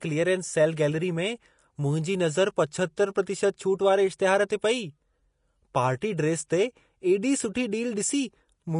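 Throughout, the speech sounds hissy and grainy, with nothing above 10.5 kHz, likely from Vorbis compression quantising the treble coarsely, which fits about 35 kbps.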